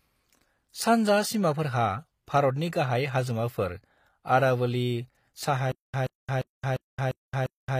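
From the start, the whole clip carries HE-AAC compression damage, and it is plainly audible. The cause is likely a low-bitrate HE-AAC v2 encode; the sound fits a rate around 24 kbps. Only the lower band is truly coded. The treble is rebuilt by copying lower bands upward and shaping them with a coarse envelope. That rebuilt top does not match the real harmonics, so s sounds come out gritty, metallic or lispy.

At 5.72 s a stutter with silent gaps begins and runs to the end. The stream likely stalled. On each retry it replayed its last fragment, then ran dry. A burst of about 128 ms repeats six times. Each is followed by about 221 ms of silence, so the cycle recurs every 349 ms at an even pace. Whatever audio belonged in that stretch is lost.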